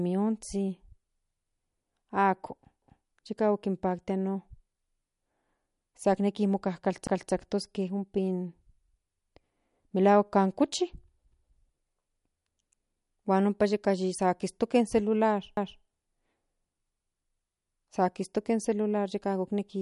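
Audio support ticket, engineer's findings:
MP3 compression, throughout: watery, swirly texture on speech, smeared consonant attacks, nothing above 11.2 kHz. Likely cause is an MP3 encode starved of bits, which fits a low bitrate around 48 kbps. The encoder drops treble at a fixed cutoff and discards weak spectral lines that flicker frame to frame.

Overlapping chunks at 2.82, 7.07, 11.32 and 15.57 s, just after "kistoke in celular" for the last one. Regular stutter as 250 ms of audio replays at each join, recurring about every 4.25 s. This fits 4 s processing chunks, each restarting 250 ms before the previous chunk ended, so the overlap region plays twice.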